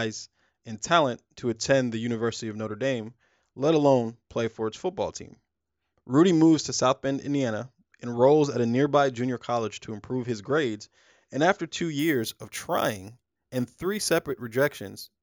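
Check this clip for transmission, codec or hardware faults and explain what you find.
One fault. From 11.99 s to the end at 15.22 s there is imaging from sample-and-hold upsampling. Samples were repeated without smoothing, which fits a rise from 16 kHz to 48 kHz. A mirrored spectrum fills 8 kHz to 16 kHz, about 16 dB below the speech. It is heard as a bright metallic fizz that follows the speech level.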